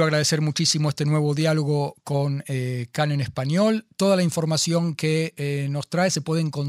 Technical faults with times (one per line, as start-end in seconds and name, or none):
none